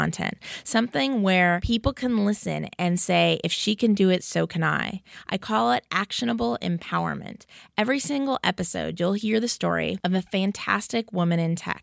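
No technical fault can be heard anywhere in the speech recording, and the signal needs no repair.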